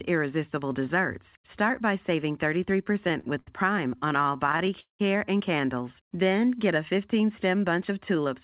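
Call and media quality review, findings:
Repeated stalls (stutter), 2.84–3.49 s and 3.97–5.01 s. Audio drags in bursts: five short gaps filled in the first span (144 ms total), eleven in the second (305 ms, longest 191 ms, faded). Jitter buffer underrun from late packets; nothing lost.

Jitter buffer slow-down, 6.06–6.30 s. Stretched sound at unchanged pitch, running at 86% speed with 40 ms added. Receiver repeating pitch periods to rebuild buffer reserve. Narrowband G.711 call path, nothing above 4 kHz.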